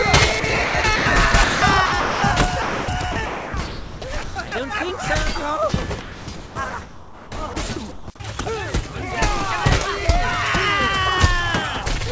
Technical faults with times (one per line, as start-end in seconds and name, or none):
0.40-1.06 sound chopped by the voice detector
1.32-2.22 sound chopped by the voice detector
2.62-4.52 sound chopped by the voice detector
6.02-7.56 sound chopped by the voice detector
7.92-8.08 sound dropped by the voice detector